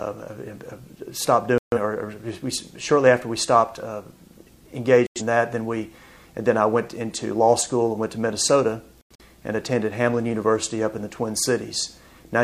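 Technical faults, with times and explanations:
1.58–1.78 s, 5.07–5.22 s and 9.01–9.24 s: corrupt frame muted. Each gap cuts in abruptly and is silent for about 0.2 s, 0.15 s and 0.23 s, several frames long. The decoder rejected damaged compressed frames and silence replaced them. Timing is kept.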